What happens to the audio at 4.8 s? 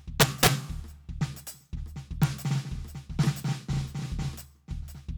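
Nothing goes wrong at 4.8 s: the music plays straight through that moment with no fault.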